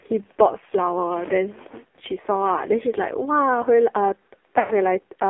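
AMR narrowband mobile codec coding runs through the whole clip. The speech is squeezed into a telephone band of roughly 200 Hz to 3.4 kHz and rebuilt from a sparse pulse-driven vocal tract model, so it sounds heavily buzzy and synthetic, which fits a low mode near 5.9 kbps.

Lost AMR speech frames come from 4.60 to 4.74 s. The decoder bridged the gap by repeating the last good pitch and vocal tract settings while lowering the gain. The sound smears and sags toward silence, and the 100 ms gap points to about five dropped frames.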